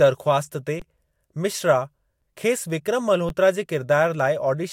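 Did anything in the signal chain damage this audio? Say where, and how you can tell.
Yes, an underrun with held sample at the output buffer. The output ran empty and the converter held its last value. Sound freezes flat at 0.80, 2.21 and 3.29 s.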